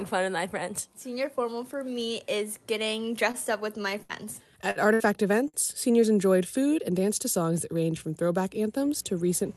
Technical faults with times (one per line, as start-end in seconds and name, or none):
3.31-3.37 short stall from a late packet
3.82-5.03 repeated packet loss (robotic sound)
5.48-5.57 short stall from a late packet
5.72-6.04 jitter buffer speed-up
6.98-7.64 jitter buffer speed-up